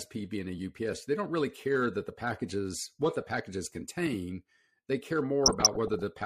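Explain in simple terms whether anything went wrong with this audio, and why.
Something did go wrong, near the very end. From about 5.43 to 6.02 seconds, the speech is hit by DAB burbling. This happens when digital radio reception is weak. A small share of the data arrives damaged, and the error correction misses some of it. Wrong bits then put short blips of noise into parts of the sound, and that makes the burbling.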